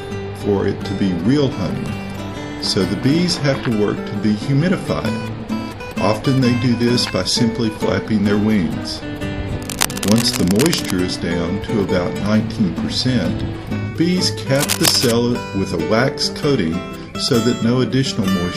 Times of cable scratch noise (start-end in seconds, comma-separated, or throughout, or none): 9.60-10.91, 14.55-15.12